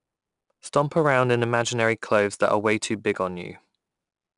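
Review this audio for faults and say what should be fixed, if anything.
4-bit ADPCM compression runs through the whole speech clip and is plainly audible: each sample is stored as a coarse 4-bit step from a prediction, so a gritty hiss rides on the louder passages and rises and falls with them. Nothing reaches above 10.6 kHz, which fits a sample rate near 22 kHz. Unlike perceptual codec damage, there is no swirling or pre-echo, only level-tracking grit. Re-export from the original uncompressed source with a higher-resolution codec at a full sample rate.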